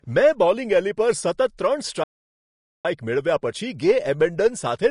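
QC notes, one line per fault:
Throughout: Vorbis compression. The coder is likely running at a low setting, one that fits roughly 36 kbps. The treble is so coarsely quantised that fine detail turns to noise, leaving the speech plainly hissy and grainy with smeared consonant attacks.
2.04–2.85 s: playback stall. The player likely ran short of data or was blocked, so output dropped to silence for about 0.81 s in mid-flow. The speech cuts off abruptly, then resumes, leaving an unnatural gap.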